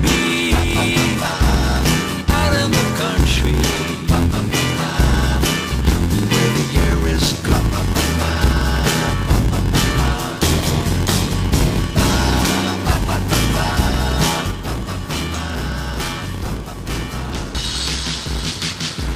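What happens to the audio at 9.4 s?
At 9.4 s the audio is caught in a block size mismatch (padded), which runs through the whole clip rather than starting there. Each block handed downstream is shorter than the block the next stage reads, so the leftover is filled with silence, a gap that fits a 512-sample read buffer. Those regular gaps produce a buzz at 86.1 Hz, and the sound plays at 0.861 times normal speed while staying at about its usual pitch.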